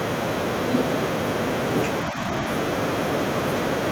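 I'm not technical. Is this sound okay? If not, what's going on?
No. From 2.1 to 2.18 s the speech briefly dips quieter. It's speech suppressed in double talk, likely from an echo canceller turning the talker down while the other side spoke.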